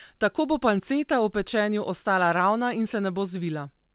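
Nothing in this speech clip points to a technical fault. It has come through a call path working as intended, with nothing above 4 kHz and a narrowband, telephone-like character that fits a G.711 A-law codec.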